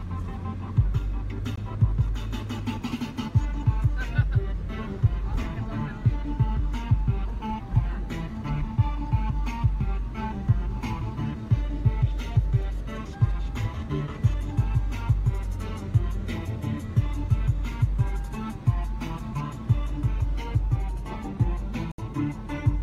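A Bluetooth stall at 1.56 s and another from 21.92 to 21.98 s each cut the sound to silence, briefly and then for about 67 ms, before it resumes. This is likely a wireless dropout: interference delayed packets to the headphones, their small buffer emptied, and playback halted until retransmitted data arrived. The first gap is a very short drop to silence, about 17 ms; the second is a longer gap.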